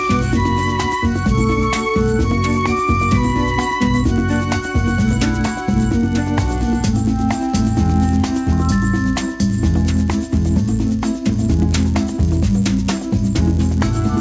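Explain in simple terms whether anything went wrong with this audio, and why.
Something did go wrong: the resampler restarted on every block. The audio was converted to a different sample rate in short pieces of 10 ms each, and the converter treated every piece as if nothing came before or after it. That leaves a tiny error at each seam. Because the seams come 100 times a second, the errors blur into a steady buzz that runs through the whole clip, from start to finish, whenever there is sound.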